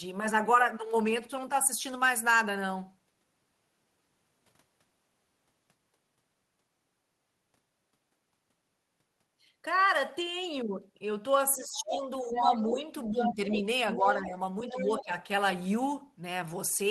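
A speech recording in which, from 11.57 s, the talker's level repeatedly sinks while a second, fainter voice breaks through. Speech suppressed in double talk dips the talker by about 15 dB at its worst across 11.57–13.64 s (roughly a second in total), by about 10 dB at 13.96–14.37 s, and by about 15 dB at 14.7–15.13 s, likely because the echo canceller, faced with both sides talking at once, turned everything down. The other side's voice leaking through appears at 11.78–11.98 s and 14.7–15.03 s at about 10 dB below the talker, and at 12.34–12.77 s and 13.23–14.11 s at about 5 dB below. These are likely loudspeaker echo that the canceller left in the microphone signal.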